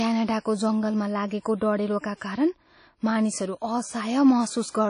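The whole speech track has plainly audible transform-codec smearing and nothing above 10.1 kHz, likely WMA compression at a low rate that fits about 32 kbps. Pre-echo shows up at 0.40 to 0.45 s (51 ms) and 2.18 to 2.21 s (31 ms), where block-spread noise fills the gap before an attack with a short hiss and softens it.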